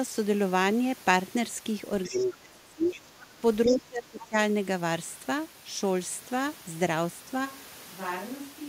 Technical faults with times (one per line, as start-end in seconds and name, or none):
2.04-2.26 other side's voice leaking through
2.08-2.88 speech suppressed in double talk
2.88-2.97 other side's voice leaking through
3.23-4.35 speech suppressed in double talk
3.65-3.76 other side's voice leaking through
7.47-8.68 switch to a distant microphone